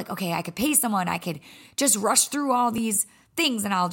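At 0.69 s and again at 2.78 s the speech has a repeated buffer: fresh audio arrived late, so a 10 ms piece played twice with a hard join. With so short a repeat, each is heard as a brief click rather than a stutter, with essentially nothing lost.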